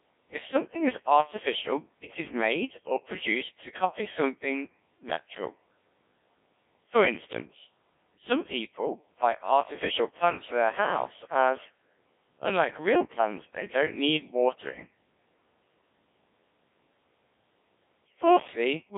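From start to finish the speech has been through a Codec 2 vocoder, and damage is heavy. The decoder rebuilds the voice from sine waves driven by pitch, voicing and envelope parameters, so it sounds robotic and buzzy, with a rate that fits about 1.3 kbit/s. Band-limiting alone, here 150 Hz to 3.5 kHz with nothing above 3.6 kHz, would only sound muffled. The synthetic buzz, rather than a smeared or warbling waveform, marks it as a vocoder.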